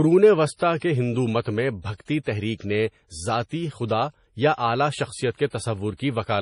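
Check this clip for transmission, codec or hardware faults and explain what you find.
There's one problem, and it runs through the whole clip: low-bitrate audio saved at a high bitrate. Nothing in the speech reaches above about 10.5 kHz, and the top end has that swirly, smeared texture you get from a starved MP3 encode. The likely cause is an MP3 at something around 32 kbit/s that was re-encoded at a much higher rate. The bigger file can't bring back what the first pass threw away, so the dull, watery sound remains.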